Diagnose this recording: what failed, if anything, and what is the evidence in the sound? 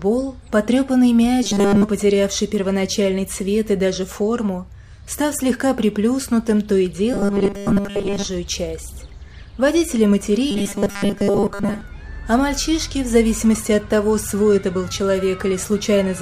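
Robotic sound from repeated short buffers at 1.43–1.83, 7.13–8.26 and 10.51–11.81 s: a rigid 200 Hz buzz, likely a driver or buffer stage looping 5 ms blocks; the spectrogram shows 200 Hz harmonic stripes.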